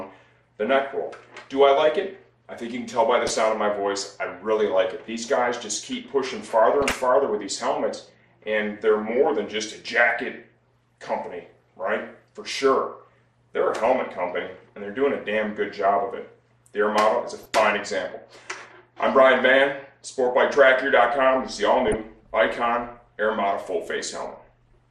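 The audio is dull throughout, with upper bands flickering in and out and a granular, gurgling texture on what remains. This is plainly audible MP2 compression, likely from MPEG Layer II coding at a rate that fits around 80 kbps, too few bits to keep every sub-band active. DAB burbling appears at 3.27–3.30 s, 6.82–7.00 s, 13.86–14.18 s, 17.31–17.55 s, 19.34–19.41 s and 21.88–21.94 s, where bit errors of a fraction of a percent slip past error correction and put short blips of noise into single sub-bands.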